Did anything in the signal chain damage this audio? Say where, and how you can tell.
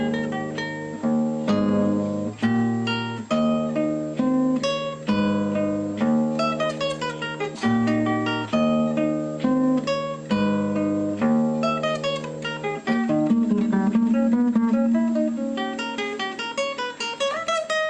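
No, nothing audible points to damage at any stage of the chain, from wiring and conversion through to storage and playback.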